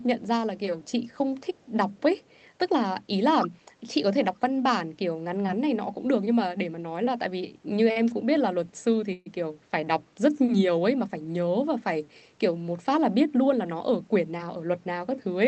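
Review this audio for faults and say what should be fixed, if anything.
Echo leak shows up at 0.87–1.17 s, 1.54–1.66 s and 2.28–2.47 s. A faint copy of the speech trails it by 174 ms, about 40 dB down. Likely cause: a far-end loudspeaker echo that its echo canceller did not fully remove. Tune or upgrade the far-end echo canceller, or have that side use a headset.

Speech suppressed in double talk occurs at 3.36–3.65 s. The speech dips by roughly 10 dB, in pieces totalling about 150 ms. This is likely an echo canceller treating simultaneous talk as echo and turning it down. Better double-talk detection in the canceller would prevent it.

A short stall from a late packet appears at 7.91–7.98 s. One sound is held 45 ms too long. The jitter buffer ran dry, and the receiver stretched the last audio until the packet arrived. Nothing is lost. A slightly deeper jitter buffer, or a steadier network path, would prevent it.

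A call audio freeze sits at 9.13–9.28 s. The last sound is extended for 132 ms, including 10 ms of silence, then the speech resumes where it stopped. Likely cause: held-up packets emptying the jitter buffer. Reducing network congestion and jitter would prevent it.

A jitter buffer speed-up runs from 13.53 to 14.64 s. The speech plays at 109% speed with unchanged pitch and sounds hurried. Roughly 100 ms is trimmed in small pitch-period cuts to shed excess buffered delay. Avoiding the packet bursts that overfill the buffer would prevent it.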